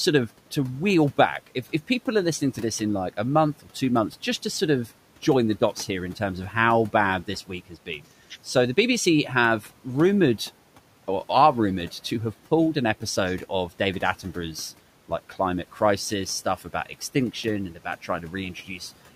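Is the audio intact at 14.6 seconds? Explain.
Yes, the speech at 14.6 seconds is intact, with only the room's own background noise audible, sitting about 23 dB below the voice.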